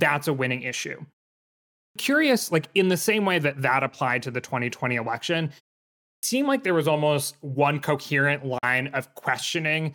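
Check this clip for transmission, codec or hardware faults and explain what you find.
Two kinds of fault turn up in this speech clip.

At 1.68 s and 5.94 s there's a clipped start after a pause: the output sleeps through the silence, and roughly 0.28 to 0.29 s of each onset is lost, so the speech bursts in abruptly.

At 8.58 s a 43 ms hole appears, most likely a Bluetooth dropout where a couple of packets arrived late. The sound cuts out, then picks up further along.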